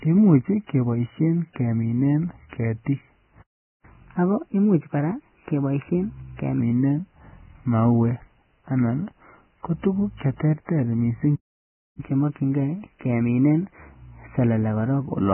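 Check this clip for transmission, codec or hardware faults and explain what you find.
Three kinds of fault are audible: codec damage throughout, two playback stalls, and a sped-up catch-up after each stall.

Vorbis compression runs through the whole clip. Nothing is left above 3 kHz, and the remaining treble is coarsely quantised into hissy, grainy noise with roughened tones and smeared attacks. This likely comes from Vorbis encoding at a very low bitrate, around 10 kbps. On a spectrogram the energy stops sharply at 3 kHz, and the upper band is speckled instead of showing clean harmonics.

A playback stall occurs from 3.42 to 3.85 s, right after "imuch keboishen keminen ketik", and a second one runs from 11.35 to 12.00 s. They last about 0.41 s and 0.63 s. The speech cuts off mid-flow and resumes. This is likely the player running short of data or having its thread blocked. Each stall shows as a flat gap in the waveform and a blank vertical band on the spectrogram.

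Catch-up at higher speed follows each stall as the player works through its backlog. From 3.85 to 6.60 s playback runs at 1.15 times normal speed with pitch raised about two semitones, then returns to normal. From 12.00 to 15.00 s, after "tuguk che terter missing", it runs at 1.1 times with pitch up about one and a half semitones. On a spectrogram the harmonics sit visibly higher and the syllables are squeezed closer together over those spans.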